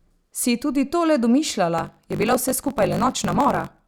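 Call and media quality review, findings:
Block size mismatch (truncated), 1.77 s to end: 50 Hz buzz, speech 1.16x fast, timbre unchanged. Block tails dropped; fits 1024-sample writes into shorter reads.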